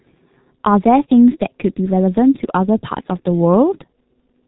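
G.723.1 codec damage runs through the whole of this speech clip, and it is heavy. Nothing above 4 kHz survives, so the speech sounds muffled, and the slowly updated voice model smears fast changes, leaving consonants blurred and the voice hoarse. The coarseness points to the codec's low bitrate of around 6.3 kbit/s, where each 30 ms frame gets too few bits to track the signal accurately.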